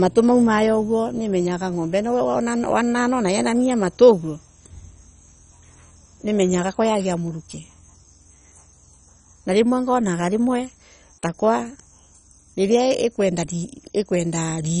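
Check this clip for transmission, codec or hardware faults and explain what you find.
Throughout the speech there is heavy MP2 compression damage, likely from encoding at a very low rate. Nothing sounds above 10.4 kHz, so it is dull. Starved of bits, the upper sub-bands flicker on and off, and the surviving ones are coarsely quantised into a gurgling, granular texture. That band-switching grit, rather than the smeared pre-echo of transform codecs, marks it as Layer II.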